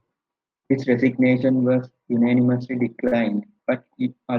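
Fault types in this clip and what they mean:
Short stall from a late packet: Right after "resignation was unanimously", near 3.07 s, the jitter buffer runs dry while waiting for a packet. The receiver stretches the last sound by 43 ms, then resumes where it stopped. Nothing is lost, but that sound hangs too long.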